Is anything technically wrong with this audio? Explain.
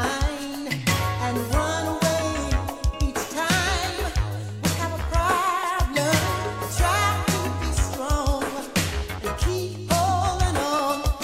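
Yes. Periodic USB or driver dropouts: from 0.78 to 10.79 s, something stalls the audio path every 2.0 s, skipping about a millisecond each time, which is heard as regular ticks.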